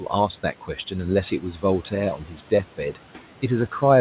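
From 1.41 to 1.63 s, and again from 2.17 to 2.51 s, the noise suppressor clips the speech. It mistakes bits of the talker for background and pulls them down along with the room noise. The first dip is about 9 dB deep and lasts roughly a tenth of a second. The second is about 11 dB deep and closer to a fifth of a second. Those stretches sound swallowed and faint against the fairly quiet room noise and the telephone-band sound, with nothing above 4 kHz.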